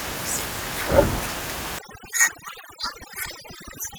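Speech, with overlap-add ripple running through the whole clip: the level swings by about 6 dB at a rate of around 300 Hz, giving a metallic buzz with extra tones around each note. This comes from resynthesising windowed frames whose overlap does not sum to a constant gain, so each frame adds its own bump in level. From 1.79 s to the end, overdone noise removal pulls down the room noise, which sits about 13 dB below the speech, breaking it up into twinkling specks. Quieter parts of the voice are stripped out along with it as the reduction shuts off bands close to its noise estimate.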